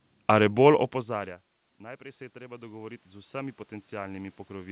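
From 0.35 s to the end of the clip, automatic gain rising: the input level falls by about 23 dB, and the gain control slowly turns itself up to compensate. Voice and room noise swell together, which separates it from the talker moving near 1.0 s, where only the voice changes. The audio is band-limited to 4 kHz, which fits a G.711 A-law call path.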